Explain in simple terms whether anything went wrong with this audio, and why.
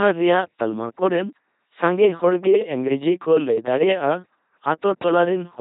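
The speech passed through an LPC-10 vocoder for the whole clip, which rebuilds each moment from either a buzz or a hiss shaped by a simple filter. That makes the voice sound robotic and buzzy, with stray hiss, and nothing above 3.8 kHz survives.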